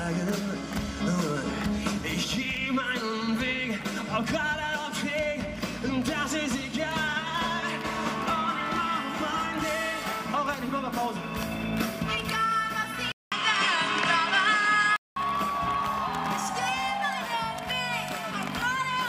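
At 13.12 s the sound drops out for about 200 ms, then comes back duller, with nothing above 9.7 kHz, a level shift of roughly 5 dB, and a new noise floor about 30 dB under the signal. That's most likely an input switched to a poorer device, with the recording jumping to a narrower-band mic that has its own tone, gain and hiss. It stays that way until 15.16 s, when the fuller sound returns.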